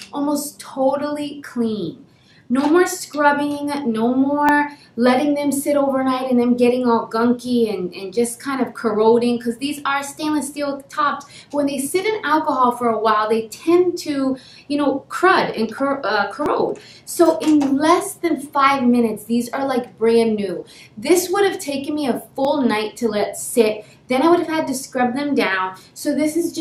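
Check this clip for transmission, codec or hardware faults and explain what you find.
There is one fault, repeated four times: audio missing between chunks, at 4.49, 10.47, 16.46 and 22.45 s. The recorder likely works in blocks of about 6 s and drops a sliver, around 15 ms, at each handover, so the sound skips forward abruptly at those points with no gap of silence.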